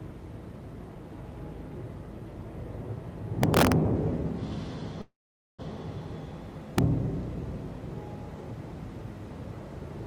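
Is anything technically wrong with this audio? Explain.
Yes, two kinds of fault are audible.

Integer overflow occurs from 3.43 to 3.72 s and again at 6.78 s. Loud moments break into harsh, violent cracks, far more abrupt than ordinary clipping. The signal was pushed past the largest value the integer format can hold, by about 4 dB in the first stretch and about 2 dB in the second. Instead of being held at the limit, those peaks wrapped around to the opposite extreme, snapping across the full range.

A call audio freeze runs from 5.01 to 5.61 s. The sound stalls into a brief fading buzz or hiss that drops to near-silence for roughly 0.46 s, then carries on from exactly where it stopped, so nothing is lost but the rest of the audio arrives about 0.57 s late. This is likely a stall in packet delivery that emptied the jitter buffer, leaving the receiver to stretch the last sound until data resumed.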